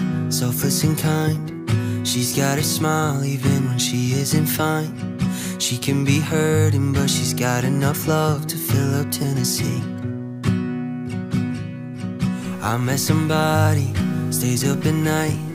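Low bit depth without dither sets in at 12.44 s and runs to the end at 15.54 s: the sound turns grainy and gritty, with distortion that moves with the signal, roughly 30 dB below it. The likely cause is truncation to about 7 bits, where rounding error tracks the waveform.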